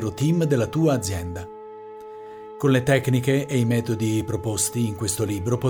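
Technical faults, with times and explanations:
No technical faults, with times or otherwise, can be heard in this clip.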